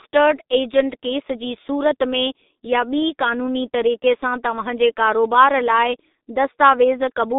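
Throughout the speech, G.723.1 codec damage is heavy: a narrow 250 Hz to 3.7 kHz band, nothing above 3.8 kHz, and blurred, hoarse consonants consistent with a 6.3 kbit/s rate and coarse 30 ms frames. A spectrogram shows a hard ceiling and smeared, blocky energy.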